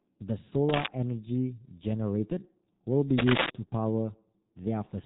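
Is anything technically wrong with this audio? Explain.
Yes, two things stand out.

The whole clip has been through a G.723.1 codec, and heavily. Nothing gets past about 3.8 kHz, so the speech is dull and boxy. The codec works in 30 ms frames and refreshes its model of the voice slowly, so consonants smear together and there's a rough, hoarse edge to everything. The amount of damage fits a bitrate of around 6 kbit/s.

Then from 3.18 to 3.50 s there's a burst of cable scratch noise: a dense, uneven rustle that sits a little above the speech level for about a third of a second. It's likely a worn cable, jack or control being moved, with the contact resistance jumping around rapidly and spraying those irregular noise bursts into the signal before it settles down again.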